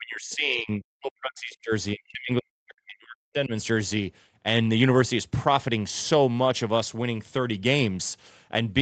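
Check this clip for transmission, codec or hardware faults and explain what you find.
One fault appears twice: speech suppressed in double talk, from 0.00 to 1.72 s and again from 1.93 to 3.51 s. The speech dips sharply, by roughly 40 dB at its deepest. The likely cause is an echo canceller that mistook the talker for loudspeaker echo while the far end was speaking, so it attenuated both. On a waveform the envelope drops sharply. A spectrogram shows the speech energy thinning across those spans. The whole clip is band-limited to 8 kHz, in line with the Opus call path.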